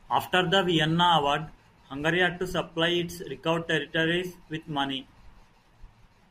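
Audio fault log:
No faults heard anywhere in this speech clip.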